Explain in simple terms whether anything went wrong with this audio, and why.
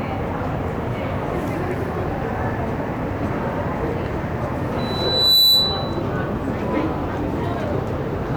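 Something did go wrong: from 4.78 to 6.02 s there's loudspeaker feedback squeal. A mic picked up its own speaker, and a 4 kHz tone kept looping and growing over about half a second into a shrill whistle sitting well above everything else.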